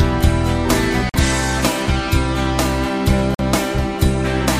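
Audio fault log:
1.09 s to 1.16 s and 3.35 s to 3.41 s, Bluetooth dropout: the output cuts to silence for about 60 ms each time, then comes back already further along, as if it had kept playing through the hole. Roughly 46 ms of sound goes missing in each gap, which fits two lost packets, most likely from the wireless link failing to deliver them in time. Unlike a buffer underrun, the audio skips ahead instead of pausing and resuming where it stopped.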